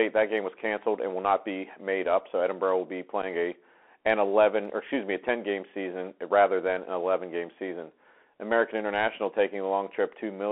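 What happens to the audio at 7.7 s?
The Bluetooth CVSD headset codec is active at 7.7 s, as it is for the whole clip. Each sample is coded as one up-or-down bit with an adapting step, which fits a 64 kbps link. The speech sits roughly between 250 Hz and 3.4 kHz, with scratchy sibilants and granular hiss.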